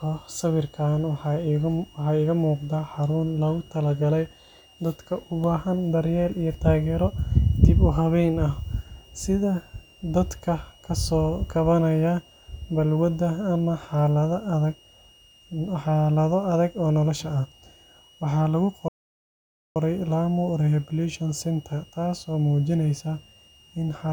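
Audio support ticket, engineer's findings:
Switching supply whistle: supply regulator running audible burst mode, coupling into audio path. Constant high whistle, entire clip, pitch wandering 2.76 to 2.93 kHz, around 3 kHz, about 30 dB below speech. Check PSU filtering, grounding.

Playback stall: player likely starved of data or thread blocked. Output silent 18.88 to 19.76 s, 0.87 s gap mid-speech, then resumes. Check buffer depth, decoder thread scheduling, upstream delivery around that point.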